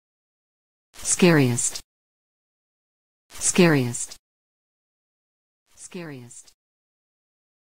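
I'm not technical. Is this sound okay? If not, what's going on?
Yes, nothing in this sound points to a technical problem.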